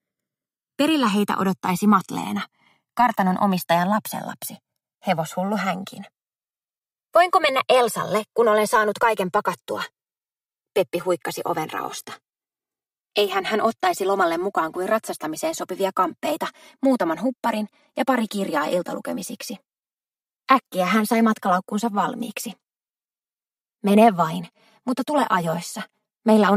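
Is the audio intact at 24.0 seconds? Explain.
No. At 24.0 seconds the channels are drifting apart, as they do throughout. The two sides run on separate clocks differing by roughly 150 ppm, so their offset keeps growing to around 5 ms by the end, and summed to mono the comb notches sweep slowly, heard as slow flanging.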